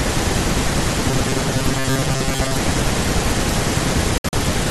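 From 1.09 to 2.60 s, audio likely reached the player too slowly, so it kept replaying a tiny slice of roughly 7.5 ms while about half the real signal was dropped. This robotic sound from repeated short buffers turns the speech into a stiff, metallic 133 Hz buzz that only loosely tracks the talking.

At 4.18 s, a run of compressed frames arrived with damaged bits, the decoder rejected them, and the player substituted silence. This corrupt frame muted fault leaves an abrupt hole of about 0.16 s, ending at 4.34 s, with the timing intact on either side.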